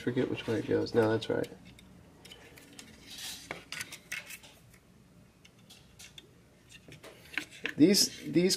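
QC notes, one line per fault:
No faults found in this clip. Nothing in the audio calls for a QC entry.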